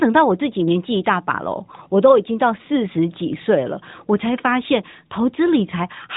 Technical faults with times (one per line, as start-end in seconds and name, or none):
none